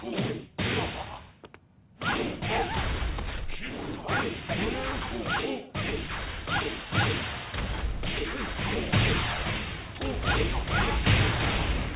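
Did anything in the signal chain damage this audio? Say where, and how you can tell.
No, nothing along the signal chain audibly damaged this audio; the signal stays continuous and stable throughout, with no stage leaving a mark on the sound.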